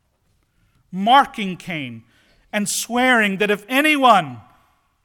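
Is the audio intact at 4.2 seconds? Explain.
Yes, at 4.2 seconds the speech plays through intact, with no dropout, click, distortion or other fault at that point.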